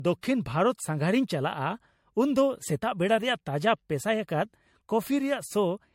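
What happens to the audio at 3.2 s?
At 3.2 s the speech carries generation loss running through the whole clip, likely from roughly five successive MP3 passes near 64 kbit/s: swirly, hollow, smeared consonants, nothing above 16.5 kHz.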